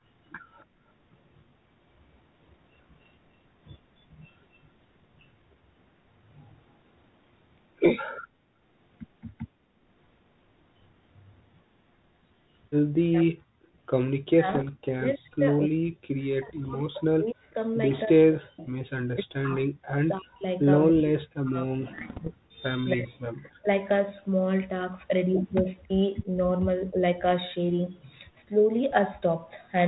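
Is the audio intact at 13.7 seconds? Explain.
No. From 13.5 to 13.77 s the background is gated by the echo canceller: while the far-end loudspeaker played, the canceller clamped the microphone down, pulling the room sound under by about 30 dB for roughly a third of a second before releasing it. The room tone dips and then swells back. A packet-loss dropout would cut everything abruptly to silence or a glitch; this is a duck of the ambience that recovers once the canceller lets go.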